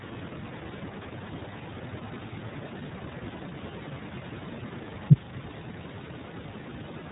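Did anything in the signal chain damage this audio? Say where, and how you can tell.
Yes, at the codec stage: the whole speech clip has passed through the iLBC codec. Nothing reaches above 3.8 kHz, and the voice is plainly rough and synthetic. Each frame's excitation is coded independently, which fits iLBC's 30 ms mode at 13.33 kbps.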